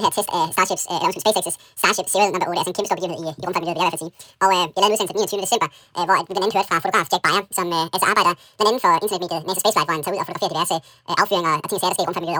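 From start to finish, the speech plays at twice normal speed and a full octave high, a sign of audio read two samples at a time.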